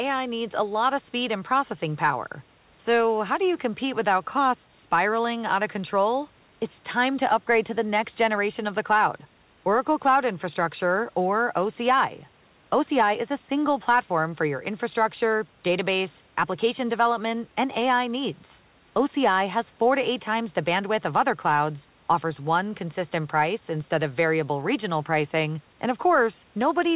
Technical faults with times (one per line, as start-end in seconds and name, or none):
none